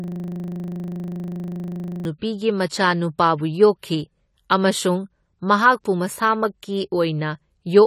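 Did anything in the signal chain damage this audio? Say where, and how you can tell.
Yes. From the very start to 2.05 s there is a steady buzz at 25 Hz, a 40 ms scrap of sound looping about fifty times until normal speech resumes with "ꯃꯆꯥꯅꯨꯄꯥꯕꯨ ꯌꯣꯛꯈꯤ ꯑꯃꯁꯨꯡ ꯃꯍꯥꯛꯄꯨ". This is a system hang loop at the driver or buffer stage: the host stalled while the hardware kept replaying the same ring buffer.

Throughout the clip the sound is dull and smeared, with plainly audible warbling and nothing above 14 kHz. This is likely AAC compression at the codec stage, consistent with AAC-LC at a low bitrate around 32 kbps, coarsely quantising the spectrum and lowering the cut-off.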